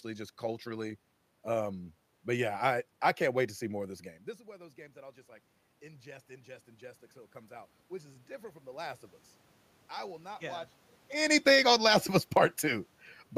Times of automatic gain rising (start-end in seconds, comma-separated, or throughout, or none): 5.80-9.08